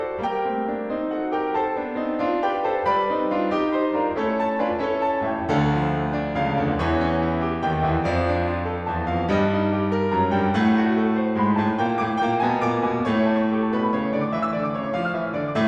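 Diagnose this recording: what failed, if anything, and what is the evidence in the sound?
Nothing failed: the music shows no audible defect at any stage of the chain, so there is no evidence of a fault to diagnose.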